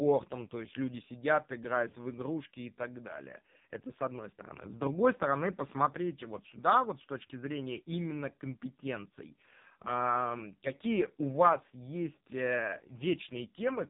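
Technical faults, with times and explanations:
Throughout, AMR narrowband mobile codec: speech stops at 3.8 kHz and sounds heavily buzzy and synthetic from sparse pulse excitation, which fits a 5.15 kbps mode.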